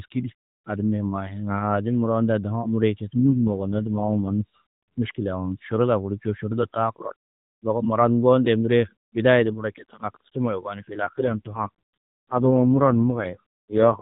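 From 3.19 to 4.42 s, and again from 11.0 s to the end after "ni fîl", the speech passes through an AMR rate drop. The sound turns buzzier and more synthetic, which fits the AMR-NB coder falling from its light-sounding 12.2 kbps mode to about 4.75 kbps. On a spectrogram the 4 kHz ceiling and the waveform stay continuous with no gap, but harmonics blur and formants smear into coarser, blockier bands.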